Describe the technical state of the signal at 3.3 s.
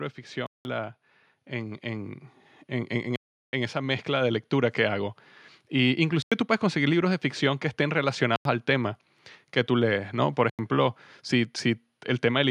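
At 3.3 s the speech sits inside a block of digital silence. It runs from 3.16 s to 3.53 s, about 0.37 s. A whole run of samples has been set to zero. The length points to a 16384-sample buffer left unfilled at 44.1 kHz. The sound stops dead with no fade and returns just as abruptly. Between the edges is a clear hole in the speech.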